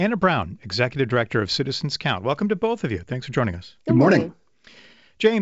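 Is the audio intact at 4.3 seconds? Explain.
Yes, the audio at 4.3 seconds is intact, with the speech passing through the G.722 wideband telephone coding at 64 kbit/s and nothing above about 7.7 kHz.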